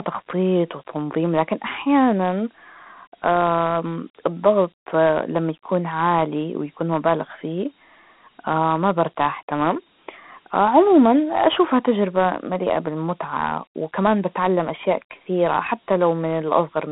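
Dialogic VOX ADPCM damage runs the full length of the speech. The sound has been squeezed through a telephone-line band from about 150 Hz to 3.4 kHz, with nothing at all above 3.8 kHz. Each sample is stored as a coarse 4-bit step relative to the last, which fits a 32 kbps Dialogic (OKI) ADPCM stream. That step quantisation is plainly audible as a gritty hiss that rides along with the speech.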